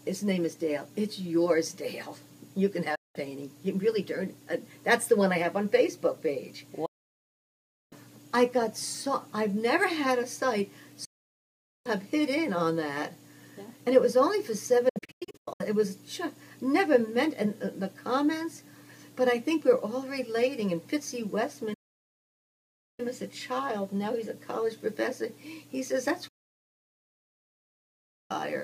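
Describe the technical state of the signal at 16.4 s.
At 16.4 s the signal is intact, with no dropout, distortion, noise burst or other fault to be heard at that point.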